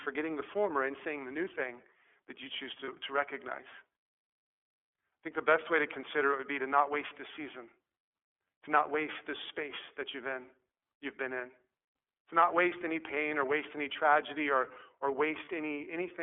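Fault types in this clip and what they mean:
iLBC codec: The whole clip runs through iLBC, so the speech sits in a phone band of roughly 300 Hz to 3.4 kHz, with a plainly rough, synthetic edge. The 30 ms framing fits the 13.33 kbps mode.
lost iLBC frames: Twice the decoder bridges a missing frame with a short, slightly buzzy held vowel, after "thing that you choose" at about 2.85 s and after "any tragedy or or" at 15.45 s. Each gap lasts about 30 ms, and the speech recovers immediately.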